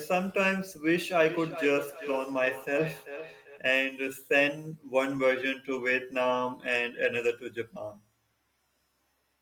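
From 0.95 to 3.66 s, feedback echo between two devices loops speech as discrete, thinning repeats roughly every 0.4 s, unlike reverb's smooth tail.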